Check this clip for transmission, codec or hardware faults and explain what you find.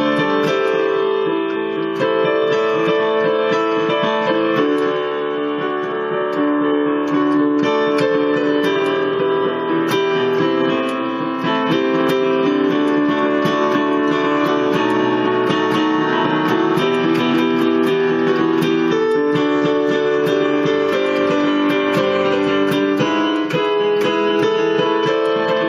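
No transmission, codec or hardware faults turned up in this clip.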